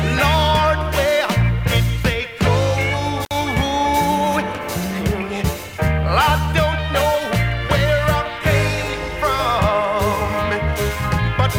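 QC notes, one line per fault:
3.24–3.32 s, intermittent contact: a loose plug or cable connection breaks briefly, dropping the signal for about 58 ms with crackle at both edges and faint hiss in the gap. The waveform shows a near-flat hole bracketed by spiky transients; the spectrogram shows broadband vertical streaks framing a darkened band.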